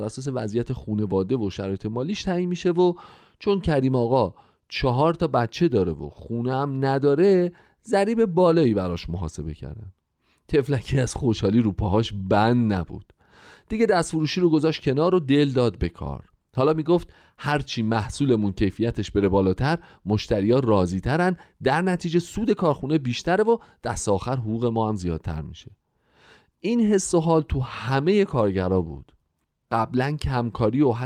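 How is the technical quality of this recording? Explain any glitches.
Nothing in this recording trips up the ear, with no glitches anywhere in the speech to point to.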